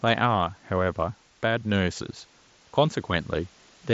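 No technical faults are audible.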